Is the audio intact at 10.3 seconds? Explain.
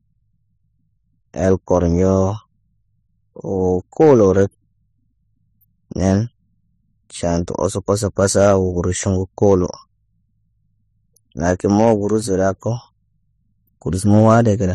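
No, transcoding between lossy codecs is audible at 10.3 s and runs through the whole speech clip. Nothing survives above 14.5 kHz, and two kinds of coding damage overlap: a smeared, swirly treble and a grainy, metallic edge on the voice. The likely cause is a low-bitrate HE-AAC encode re-encoded as low-bitrate MP3. The second codec spent its few bits preserving the first codec's artefacts, stacking its own on top while the lower cut-off remained.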